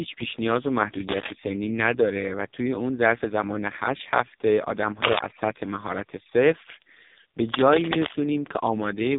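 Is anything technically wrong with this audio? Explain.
Yes. Throughout, AMR narrowband mobile codec damage: nothing passes above 3.8 kHz, and heavy low-bitrate pulse modelling, fitting roughly 5 kbps, makes the speech buzzy and synthetic.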